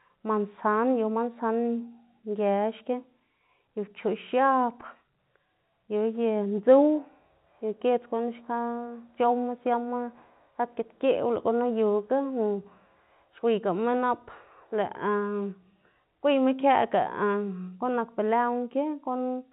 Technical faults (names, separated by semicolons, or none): none